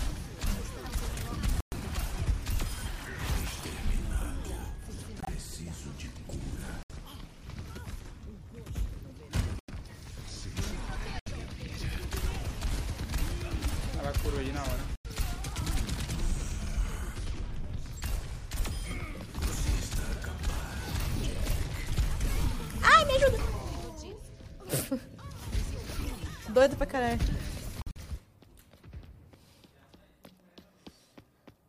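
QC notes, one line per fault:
1.60–1.74, 5.20–5.29, 6.83–6.91, 9.59–9.72, 11.19–11.28, 14.96–15.06, 27.82–27.98 s, corrupt frame muted: bit errors damaged compressed frames, the decoder rejected them, and the player substituted silence. Each gap, 80 to 160 ms, drops out abruptly and spans several frames, with no loss of timing afterwards.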